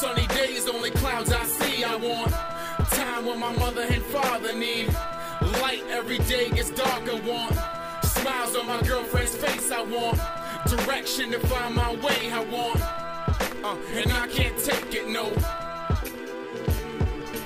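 From about 11.66 s through 16.78 s there's a run of periodic USB or driver dropouts: a regular tick roughly every 1.02 s, about seven in all. Each time, something stalls the USB link or audio driver on a fixed schedule and roughly a millisecond of audio gets dropped and replaced with silence. That gap is too short to hear as a pause, so it comes across as a crisp click that only shows up while there's signal underneath it.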